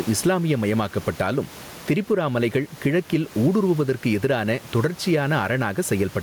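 Gain pumping runs through the whole clip: the room noise, sitting about 28 dB below the speech, rises in every pause and sinks each time the speech gets loud, a swing of roughly 10 dB. This likely comes from the microphone gain being set far too high, with a fast limiter clamping down on each loud sound. Unlike a noise gate, the noise never cuts to silence. It breathes up and down with the speech, which sounds squashed.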